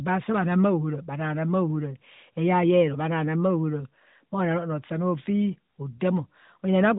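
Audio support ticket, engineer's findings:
Findings: no fault identified in the speech audio.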